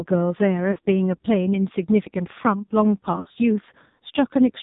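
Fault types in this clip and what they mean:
AMR narrowband mobile codec: Classic phone-line speech. Everything above 4 kHz is gone, and the heavy buzzy, synthetic edge on the voice suggests one of the low AMR modes, around 6 kbps, where the vocal-tract model gets very few pulses to work with.
Lost AMR speech frames: Dropped radio frames, where the decoder papers over the gap by reusing the last good pitch and vocal-tract settings at falling gain. There's a short 40 ms dip at 0.72–0.78 s, then a rougher, smeared patch from 3.16 to 3.39 s, with gaps scattered over it and the longest about 60 ms.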